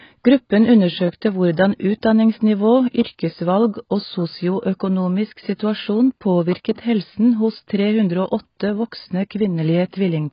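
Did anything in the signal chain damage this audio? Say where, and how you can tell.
Yes. The speech sounds dull and warbly throughout, with nothing above 5.1 kHz. The codec stage is the likely cause: heavy AAC compression, consistent with roughly 16 kbps.

A brief hiss smears ahead of an attack at 6.75 to 6.78 s, spreading about 32 ms. This is codec pre-echo, with quantisation noise filling the transform block before the onset.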